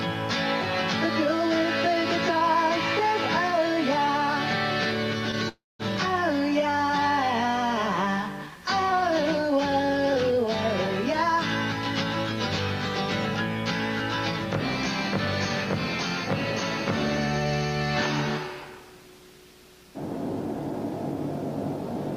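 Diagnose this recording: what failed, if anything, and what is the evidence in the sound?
A call audio freeze at the network stage: delivery likely stalled and the jitter buffer ran dry. From 5.49 to 5.82 s the last sound is stretched into a fading buzz or hiss that falls to near silence, then resumes where it stopped, about 0.3 s late, with nothing lost.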